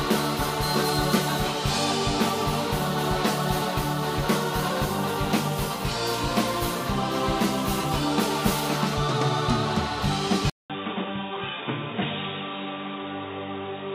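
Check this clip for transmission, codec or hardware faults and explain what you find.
One fault appears, in the last few seconds. At 10.50 s the audio drops out for about 200 ms, then continues to the end narrower, duller and boxier, with nothing above 3.8 kHz, a level roughly 5 dB lower, and a new, different background noise sitting well below the signal. This is likely an input switched to a poorer device: the system swapped to another microphone or a headset call profile, whose restricted bandwidth, tone, gain and noise floor replace the original input's.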